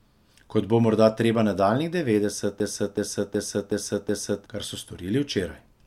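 From 2.60 to 4.46 s the speech falls into a system hang loop: the host stalled while the audio hardware kept replaying its ring buffer. A 371.52 ms fragment, which fits a 16384-sample buffer, repeats five times at 2.69 Hz, and about two seconds of speech are lost.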